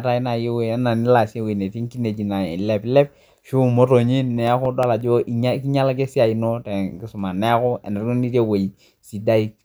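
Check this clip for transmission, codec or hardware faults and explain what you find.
One disc-playback fault is present. From 4.11 to 5.01 s, six regular ticks of uneven strength, the longest about 3 ms, cut through the speech: CD scratch ticks, where a scratch defeats error correction once per revolution and the player patches the missing samples.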